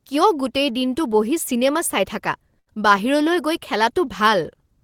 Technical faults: burst of packet loss

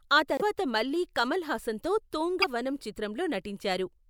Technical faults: broken MP3 bit reservoir

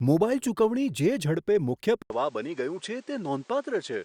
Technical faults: input switched to a poorer device

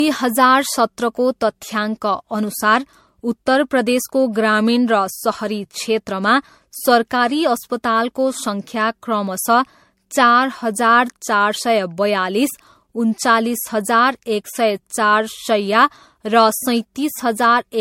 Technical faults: generation loss

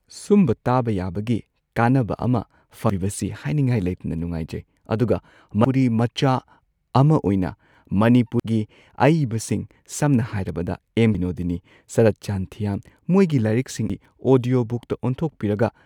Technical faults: audio missing between chunks

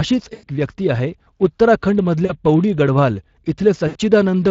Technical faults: Speex codec; VoIP packet loss concealed by the speech codec

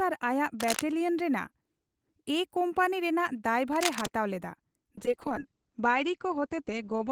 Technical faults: cable scratch noise; call bitrate drop

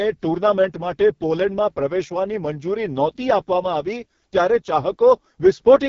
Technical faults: AMR wideband (HD Voice) codec

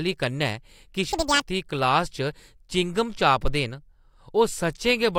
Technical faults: audio read two samples at a time (double speed)

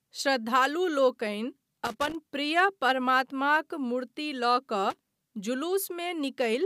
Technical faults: loose connector crackle

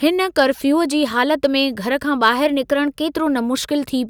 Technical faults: hard clipping; drift correction step

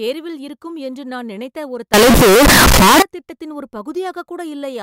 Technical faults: float read as integer

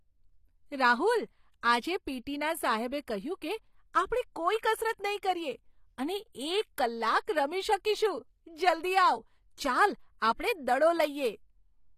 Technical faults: HE-AAC compression; pre-echo

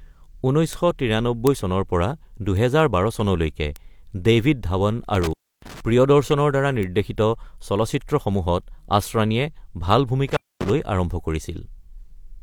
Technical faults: bit error spike; intermittent contact

